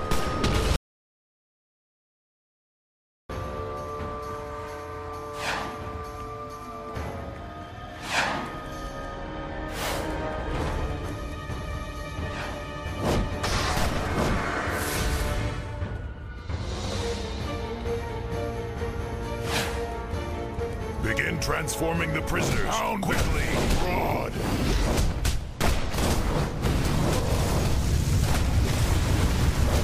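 At 0.76 s the sound cuts off abruptly in mid-flow and returns just as suddenly at 3.29 s. This is an audio dropout to silence, with about 2.53 s lost. The gap is silent with no room tone or noise floor, which sets it apart from a natural pause or a noise gate closing. The recorder likely kept writing silence after its input was lost, and whatever sounded during that stretch is gone.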